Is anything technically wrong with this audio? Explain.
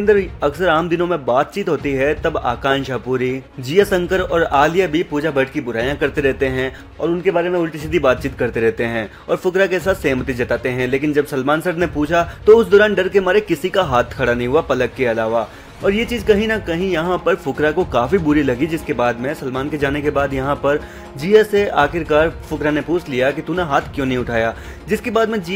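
No, nothing here sounds technically wrong; it all comes across just fine, with nothing that catches the ear as a problem.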